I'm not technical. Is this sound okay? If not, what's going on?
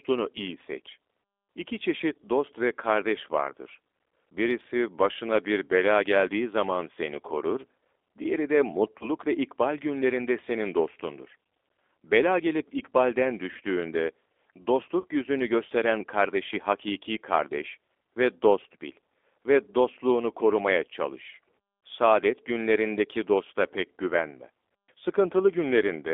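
No. The G.729 codec is used throughout: this phone-call compression rebuilds the speech from a simplified model, so it sounds thin, muffled and slightly rough and synthetic.

VoIP packet loss concealed by the speech codec occurs at 8.99 to 9.10 s, right after "seni korur diğeri de", and at 15.00 to 15.06 s, just before "yüzünü gösteren kardeşi hakiki". About 20 ms and then 40 ms of audio went missing, and the decoder papered over each gap with a brief stretched-out sound that fades and stays weak for a moment afterwards.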